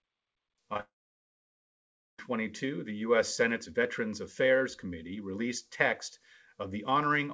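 Two short stretches of the call failed to reach the decoder in time, at 0.74 to 0.76 s and again at 0.77 to 0.80 s, a gap of about 10 ms and then about 20 ms. Each time the receiver papered over the hole by extending the sound it had just played and then blending back into real audio. This short concealed packet loss comes across as a quick smear or flutter rather than a clean break.

Straight after, from 0.80 to 2.19 s, the sound stops arriving altogether, a long network dropout that is most likely the cause. The receiver briefly stretches the last sound into a fading buzz or hiss, and then about 1.3 s of the nearly 1.4 s gap is silence. The audio resumes at 2.19 s with that stretch simply missing. The returning sound still carries the G.722 call path's band limit, with nothing above 8 kHz.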